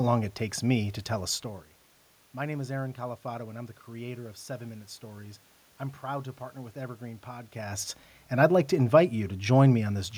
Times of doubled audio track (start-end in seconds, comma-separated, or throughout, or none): none